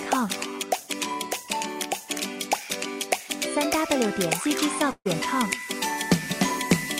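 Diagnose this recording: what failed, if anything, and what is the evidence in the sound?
Network stage: a burst of packet loss at 4.91 to 5.07 s. Concealment held and faded the last sound over 140 ms lost, a smeared spectrogram band then 50 ms of silence.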